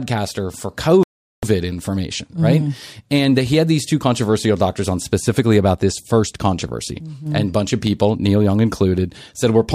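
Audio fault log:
1.03–1.43 s, Bluetooth stall: the speech drops to complete silence for about 0.4 s, then resumes where it left off. Likely radio interference delayed packets, so the headphones' buffer emptied and playback paused until the resent packets arrived.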